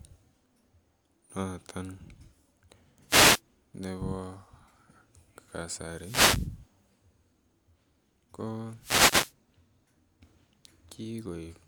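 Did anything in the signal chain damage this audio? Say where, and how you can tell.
Yes. Short swishes of static hit the speech at 3.07–3.41 s, 5.88–6.60 s and 8.80–9.34 s. These are wireless microphone noise hits in the analogue radio link. Reflections cancel the FM carrier, so receiver noise surges up over the signal.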